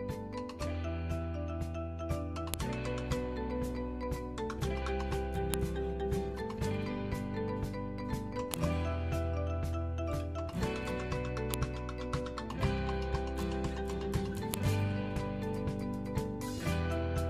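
File header played as audio, at 2.54, 5.54, 8.54, 11.54 and 14.54 s: the audio was joined from 3-second pieces whose WAV headers were left in, so those header bytes play as samples, producing a sharp, loud click at each seam regardless of the underlying sound.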